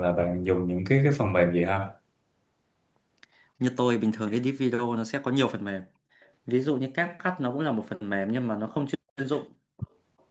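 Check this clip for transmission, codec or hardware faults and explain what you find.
Two kinds of fault turn up in this speech, both tied to echo handling on a loudspeaker call.

Echo leak, from 6.21 to 6.31 s and again from 10.19 to 10.24 s: a very faint, delayed copy of the talker trails in, 368 ms late the first time and 379 ms late the second. A loudspeaker likely fed back into the microphone, and the echo canceller let brief scraps of it through.

Speech suppressed in double talk, from 9.79 to 9.87 s: the voice drops deeply for well under a tenth of a second, then recovers. With both sides talking at once, the echo canceller likely mistook the talker for echo and turned the signal down hard.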